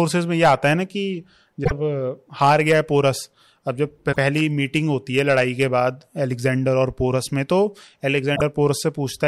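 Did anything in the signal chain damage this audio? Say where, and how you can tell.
Yes, at the codec stage: damaged data in a compressed stream, heard as three short disruptions at 1.61–1.72 s, 4.09–4.17 s and 8.32–8.41 s, each lasting roughly 80 to 110 ms. Corrupted bytes made the decoder misread those frames and lose sync until it found a valid header. On a spectrogram each shows as a brief vertical break unrelated to the surrounding sound, and the waveform shows an abrupt discontinuity.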